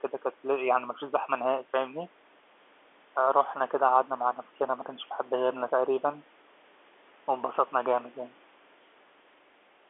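No technical faults can be heard in this speech.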